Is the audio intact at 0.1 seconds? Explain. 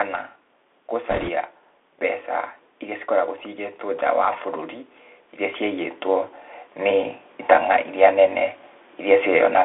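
No. At 0.1 s the speech is already passing through a Bluetooth CVSD headset codec, present throughout the clip. Each sample is coded as one up-or-down bit with adaptive step size, consistent with a 64 kbit/s stream. The band is limited to roughly 250 Hz to 3.5 kHz, and granular hiss and scratchy, slope-overloaded sibilance are plainly audible.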